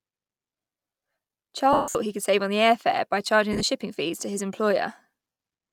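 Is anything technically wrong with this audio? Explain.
Yes. There are lost LE Audio frames at three points: 1.73 to 1.95 s, just before "he could save on", where about 210 ms goes missing with the longest gap around 150 ms; 3.53 to 3.63 s, between "the air fare by" and "shipping fees to his", in short scattered gaps; and 5.32 to 5.39 s. The LC3 decoder fills each gap by repeating the last spectrum with randomised signs, so the sound smears into a noisy wash. The longer first dropout fades toward silence.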